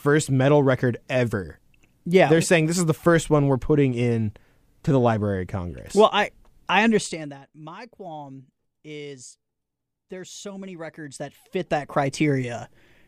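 A speech clip with zipper noise in two places. From 6.86 to 7.38 s, just after "I I", the level drops by about 20 dB. It falls in coarse steps, about a hundred per second, with no smoothing between them. Each step leaves a small click, so a fine buzzing tick rides on the speech. From 10.71 to 12.27 s, after "there's so", the level climbs back by about 20 dB. The same stepped ticking is heard.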